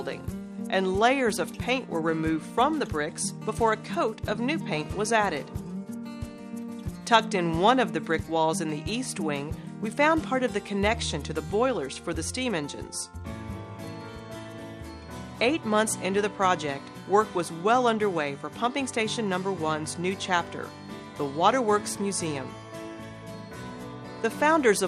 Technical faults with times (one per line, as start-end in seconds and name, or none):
0.00-24.88 MP2 compression